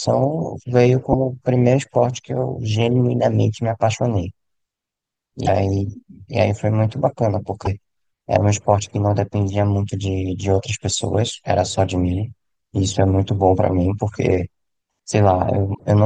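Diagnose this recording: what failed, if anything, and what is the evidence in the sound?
Damaged data in a compressed stream, at 1.09–1.15 s, 5.44–5.49 s, 7.62–7.67 s and 15.71–15.80 s, is a codec-stage failure. Each brief glitch, about 50 ms (the last near 90 ms), marks corrupted frames the decoder misread before resynchronising on the next valid frame header.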